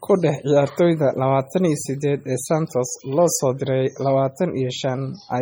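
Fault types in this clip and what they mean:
MP3 compression: The speech sounds watery and swirly throughout, with metallic chirping on s sounds and smeared consonant onsets, most likely from MP3 encoding at a bitrate around 32 kbps. Starved of bits, the encoder discards weak frequency lines, which blink on and off between frames. On a spectrogram this appears as flickering holes and isolated islands of energy in the upper bands, with nothing above 21.5 kHz. The waveform shows softened, blurred attack edges.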